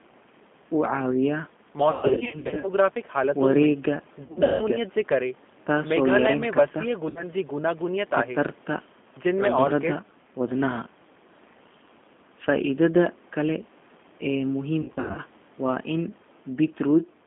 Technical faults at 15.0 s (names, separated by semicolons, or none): G.729 codec; VoIP packet loss concealed by the speech codec